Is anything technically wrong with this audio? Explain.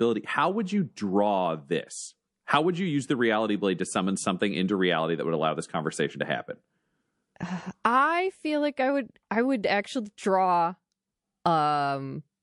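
Yes, there's MP3 compression damage running through the whole speech clip, and it's plainly audible. The sound has that watery, swirly quality, with the s sounds going metallic and chirpy. That's likely an encoder short on bits, fitting something around 48 kbps. It zeroes quieter frequency lines that flicker on and off between frames, and consonant attacks come out smeared.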